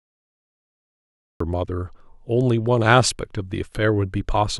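The clip opens with a cut-off start: digital silence runs from 0 to 1.40 s, then speech begins abruptly mid-sound, with no natural attack. The capture began late. On a waveform, a flat line jumps straight into the speech waveform; a spectrogram shows a hard vertical edge.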